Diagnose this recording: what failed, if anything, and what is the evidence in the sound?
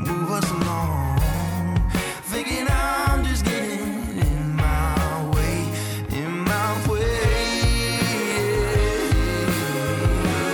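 Three short skips land at 2.34 s, 5.33 s and 8.32 s. They are spaced almost exactly 3 s apart. Each drops roughly 15 ms of sound, and the two sides are butted together with no gap. The regular spacing points to the buffer or recording stage. The likely cause is audio missing between chunks. The recorder writes 3-second chunks and loses a sliver each time it closes one and opens the next.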